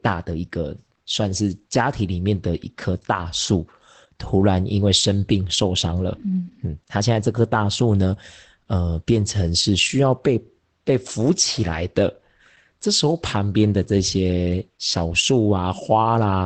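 Throughout the speech, Opus voice compression is plainly audible. The codec appears to be running in its SILK linear-prediction mode at a wideband setting, which fits a bitrate around 12 kbps. Content above about 8.7 kHz is missing, so the voice sounds muffled, and the coarsely coded excitation adds a hoarse, faintly robotic edge. On a spectrogram, energy stops at a hard ceiling near 8.7 kHz, and the harmonics below it look smeared in blocks that match 20 ms frames.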